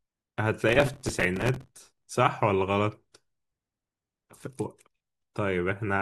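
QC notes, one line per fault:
0.69–2.07 s, processor overload crackle: the processor fell behind its audio deadlines and kept missing them back to back for about 1.4 s. The grit is fine-grained, which fits very short buffers of a few milliseconds each, perhaps on the order of a hundred missed in this stretch. Each miss replayed a scrap of old audio with hard edges, so the speech is overlaid with dense crackle and tearing that stops once the load eases.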